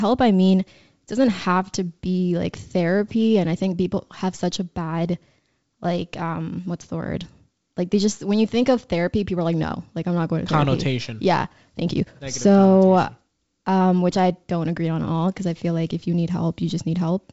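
Nothing stood out on listening to this speech, which comes across as ordinary G.722 wideband telephone audio at 64 kbit/s, reaching up to about 7 kHz with at most a faint trace of the coding.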